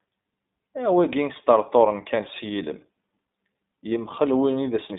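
A speech recording carrying iLBC codec damage for its whole length. The audio is confined to roughly 150 Hz to 3.7 kHz, a narrowband telephone line, so sibilants and upper harmonics are gone. Because each short block of excitation is coded without reference to the one before it, the speech comes out plainly rough and slightly synthetic, with a grainy texture. That character points to iLBC's 20 ms frame mode at around 15.2 kbps.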